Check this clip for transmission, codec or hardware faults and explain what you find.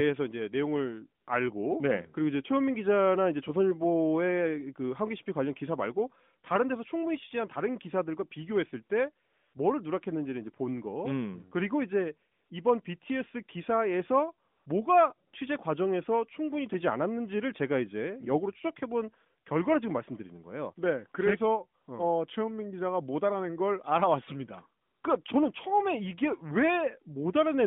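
One fault kind turns up: AMR comfort noise, heard in the speech's pauses. It occurs over a narrowband mobile link, whose 150 Hz to 3.6 kHz band and light coding sound fit AMR-NB's 12.2 kbps mode.

AMR comfort noise appears at 1.24–1.28, 9.26–9.54, 12.32–12.50, 14.48–14.66, 15.28–15.34, 21.82–21.88, 24.82–25.04 and 25.24–25.26 s, lasting 20 to 280 ms. In these gaps the sender stopped transmitting speech frames, and the receiver synthesised noise from a rough level-and-spectrum description. The real background is swapped for a smooth, steady hiss that cuts in and out.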